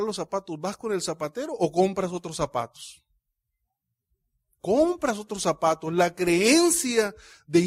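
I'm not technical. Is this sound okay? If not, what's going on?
Yes, this speech recording has no problems to worry about.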